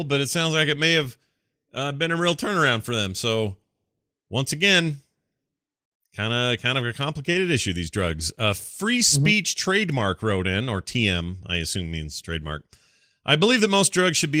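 Nothing's actually wrong with this speech clip; it's carried by Opus voice compression, which is working as it should here, so there's no technical problem to point to.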